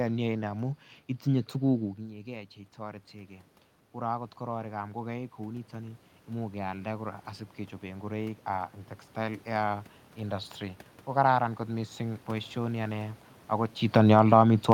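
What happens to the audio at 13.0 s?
At 13.0 s the speech runs intact, with only the background noise of the room beneath it.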